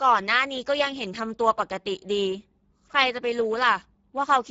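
A speech clip with plainly audible Speex codec damage throughout: voicing sounds hoarse and grainy, which fits a bitrate near 10 kbps. A spectrogram shows a hard ceiling at 7.7 kHz, with smeared, noisy harmonics replacing clean, crisp striations.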